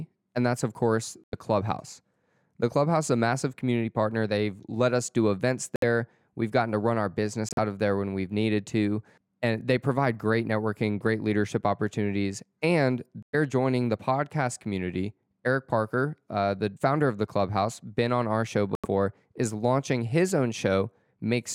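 Speech with five corrupt frame muted dropouts, at 1.24–1.33, 5.76–5.84, 7.49–7.59, 13.23–13.35 and 18.74–18.86 s. Damaged compressed frames were rejected and replaced with silence, leaving abrupt flat gaps in the waveform and blank vertical strips on the spectrogram. Timing is unchanged, and the gap lengths fit several lost frames of roughly 25 ms each.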